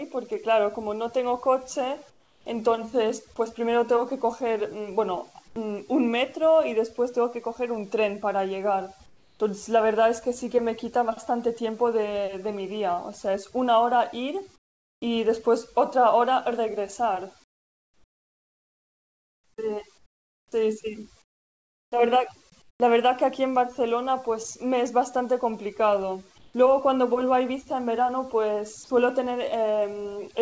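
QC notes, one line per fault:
throughout, overdone noise removal: The noise reduction is set too aggressively for a noisy recording. Frequency bands that come close to the background estimate are pulled far down or removed, and the softer parts of the speech go with them. The gaps between phrases drop in level, with twinkling, isolated specks of residue. The voice loses its low-level detail. Everything sits below 8 kHz, consistent with the G.722 call path.
2.10–2.46 s, 5.48–5.56 s, 9.06–9.40 s, 14.56–15.02 s, 17.44–22.80 s, 26.38–26.54 s, comfort noise in place of the background: In each pause the real background gives way to a steady, featureless hiss. That is likely the receiver generating comfort noise while the sender's voice detector stopped transmitting. The replaced stretches last 360 ms, 80 ms, 340 ms, 460 ms, 3.56 s (spread across 17.44–22.80 s) and 160 ms. The fill sits lower than the background it replaces, by about 10, 2, 8, 17 and 4 dB where measurable, so the floor steps down.
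20.49–20.52 s, onset clipped by the voice detector: Speech resumes inside the comfort-noise stretch with its first 30 ms missing. The attack arrives abruptly, without its soft build-up, as though switched on mid-sound. The likely cause is a voice detector slow to register that sound had restarted, so the opening frames were never sent and the receiver kept playing synthetic noise until transmission resumed.
28.84–28.90 s, sound dropped by the voice detector: About 50 ms of sound disappears and is replaced by 60 ms of steady noise, leaving a brief hole. The voice detector likely judged the sound to be background and cut transmission, and the receiver filled the gap with comfort noise until the detector triggered again.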